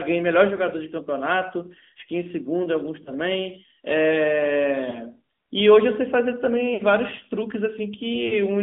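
From the first second to the end, the speech sounds thin, boxed in and plainly buzzy, with nothing below about 250 Hz or above 3.5 kHz. That is the AMR narrowband mobile codec. It samples at 8 kHz and rebuilds each short slice of speech from a vocal-tract model driven by a few pulses, discarding the real waveform detail. The plainly audible synthetic edge suggests one of the middle AMR-NB modes, around 10 kbps.

Brief hiccups occur at 0.56, 3.04, 4.90 and 8.28 s, each a short dip or warble lasting about 20 ms. At 6.74 s a longer one lasts about 60 ms, where the sound smears and sags before recovering a little rough. These are lost AMR speech frames. Corrupted frames were thrown out, and the decoder covered each gap by repeating the last good pitch and vocal-tract settings at falling gain. The longer gap at 6.74 s points to a short run of consecutive losses.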